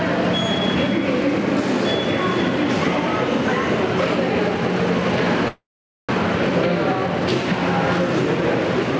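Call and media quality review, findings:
Gain pumping, throughout: background noise swells in gaps between loud sounds and ducks under each one, swing of roughly 5 dB. Likely an input gain set far too high, with a fast limiter clamping every peak. Waveform envelope flattened; spectrogram noise floor brightens between events, darkens under transients.

Call audio freeze, 5.48 to 6.12 s: the last sound is stretched into a fading buzz or hiss, then near-silence for about 0.46 s, then the audio resumes where it stopped, with nothing skipped and everything after arriving about 0.6 s late. Likely jitter buffer underrun from held-up packets. Spectrogram shows a smeared, repeated frame decaying into a dark band; waveform shows a flat gap.

Call path: no energy above 8 kHz, consistent with a wideband call codec such as G.722.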